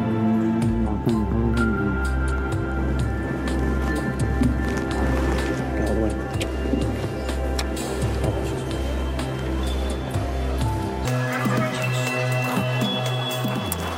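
From 11.05 s to the end, a section at the wrong speed plays 1.92 times too fast, jumping about ten semitones higher and hurried, likely from a clock mismatch.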